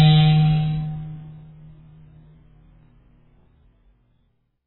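Throughout the music, nothing sounds above 4 kHz and sustained tones warble and smear, likely from heavy AAC compression at a very low bitrate near 8 kbps, not a simple low-pass filter.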